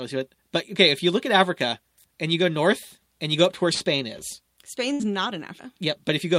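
At 3.73 to 3.94 s, just after "go up to where", a burst of packet loss interrupts the speech. The receiver holds the last sound for about 70 ms, fading it, then jumps ahead with roughly 60 ms of speech gone. A second burst of packet loss at 4.94 to 5.02 s behaves the same way: about 58 ms of faded continuation, then resumption with about 60 ms missing.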